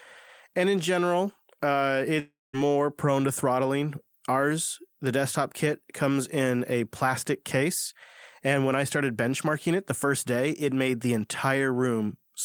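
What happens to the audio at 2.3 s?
A long network dropout likely stopped packets arriving from 2.19 to 2.55 s: after "and in general uh", the last sound smears into a fading buzz, then silence, until "prone to throttling" resumes with the gap lost.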